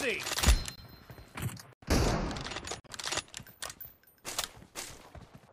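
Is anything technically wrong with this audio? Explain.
Yes. There are three corrupt frame muted events, at 0.75–0.81 s, 1.73–1.84 s and 2.80–2.90 s. Damaged compressed frames were rejected by the decoder and replaced with silence, leaving abrupt gaps of about 60 to 110 ms, consistent with several frames lost, while the timing holds.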